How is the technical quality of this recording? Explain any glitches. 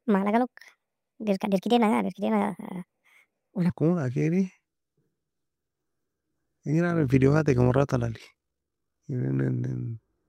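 Two glitches.

From the very start to about 3.70 s, there's a section at the wrong speed. The speech runs 1.54 times too fast, so the pitch jumps by about seven semitones and everything sounds chipmunky and rushed. Because speed and pitch move together, it's likely the audio was played back or resampled against the wrong clock rather than deliberately pitch-shifted. It snaps back to normal after that point.

Then from 6.90 s to 9.03 s there's overlap-add ripple. The audio was evidently chopped into windowed frames and stitched back together with an overlap that doesn't sum to a steady gain, so the level dips and swells once per frame. Here the swing is about 6 dB at roughly 50 times a second, which you hear as a buzzy, robotic flutter riding on the speech.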